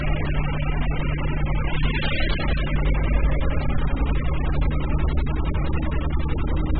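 Throughout, nothing sounds above about 4.6 kHz, and what remains is smeared and warbling. That points to heavy AAC compression, likely at around 8 kbps. A plain low-pass filter would cut the top cleanly but leave no warble.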